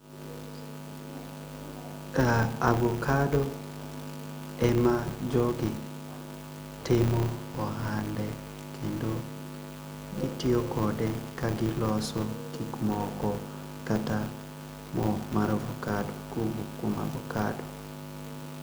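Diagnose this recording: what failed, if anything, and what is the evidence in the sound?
A steady buzz at 100 Hz runs under the speech for the whole recording, rising and falling with the talker's level and dropping away in the pauses. That is a filter restarted on every block, a fault in the processing stage. The filter discards its internal state at each block boundary and begins again from silence, so every block opens with a small transient. The 100 Hz repetition points to blocks of about 10 ms.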